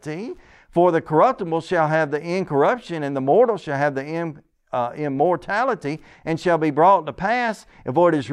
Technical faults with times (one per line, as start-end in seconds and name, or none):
none